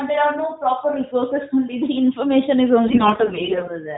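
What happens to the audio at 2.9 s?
AMR bit errors begin at 2.88 s and last until 3.78 s: around one bit in ten of the less protected bits in 40 mobile codec frames arrived flipped, misplacing the excitation pulses and skewing fine pitch, gain and spectral values, so the speech holds its pitch and level but turns hoarse, scratchy and gargly.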